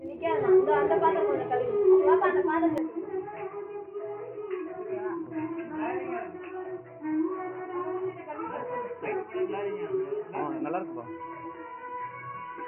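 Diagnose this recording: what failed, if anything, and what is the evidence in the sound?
At 2.78 s the sound turns dull and boxy with no gap, drops a little in level and gains a faint new background hiss; nothing above 3 kHz remains to the end. This is likely an input switched to a poorer device at the driver stage, its narrower band and different noise taking over.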